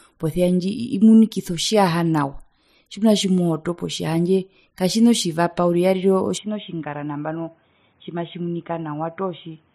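At 6.38 s the speech abruptly loses its top end and stays that way to the end of the clip: nothing remains above 3.8 kHz, the level drops by roughly 5 dB, and faint new background noise sits far below the voice. There is no gap at the transition. This is an input switched to a poorer device, likely a narrowband headset profile or secondary microphone taking over mid-recording, giving the dull, boxy tone.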